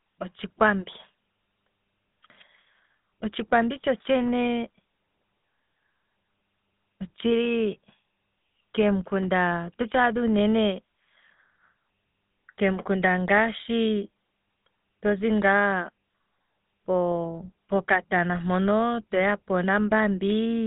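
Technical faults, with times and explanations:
Throughout, GSM full-rate codec: the speech has passed through the original GSM full-rate coder, whose sound fits a 13 kbps channel. It models the vocal tract as a filter and excites it with a coarse, regularly spaced pulse train that keeps only a third of the excitation detail. That thinned excitation gives the voice a plainly audible buzzy, gravelly roughness. The band sits at about 150 Hz to 3.7 kHz, with nothing above 3.8 kHz.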